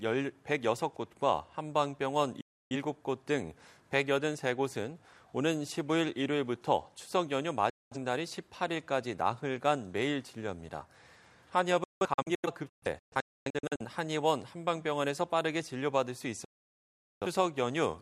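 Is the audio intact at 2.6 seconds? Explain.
No. At 2.6 seconds the sound is inside a digital broadcast dropout that runs from 2.41 to 2.76 s. The receiver stopped getting usable frames, either because the signal was lost or because frames failed their checksum. It muted until good frames returned. The sound fades out in about 3 ms, leaves a hole of roughly 0.3 s, and then comes back further along in the programme. That gap fits about seven lost frames. Whatever was sent during it is gone.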